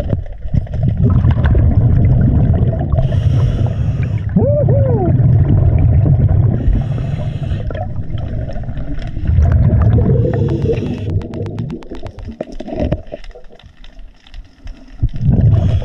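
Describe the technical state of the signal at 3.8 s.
At 3.8 s the signal is intact, with no dropouts, clicks, distortion or other audible faults at that moment.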